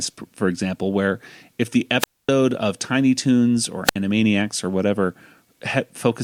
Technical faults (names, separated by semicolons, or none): wireless microphone squelch dropout